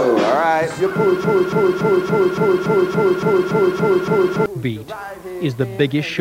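A broken-record loop runs from 1.24 s to 4.46 s: a 0.28 s fragment repeats 11 times, identically and back to back, likely from a stalled player or stream resending its last buffer. Unlike echo, nothing decays, and the audio that should have played is lost.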